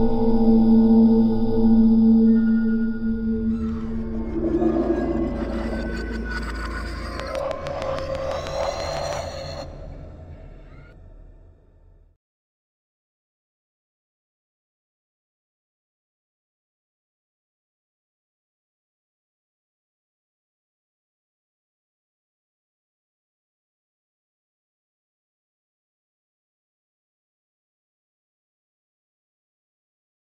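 From 7.20 s to 9.14 s a train of clicks sits on top of the audio: about fifteen near-identical pulses at a steady 6.2 per second, each peaking roughly 10 dB above the surrounding sound, so they register as a sharp, even ticking rather than isolated pops. The regular spacing and uniform shape point to a periodic disturbance, likely electrical interference from nearby equipment or a faulty connection or power supply.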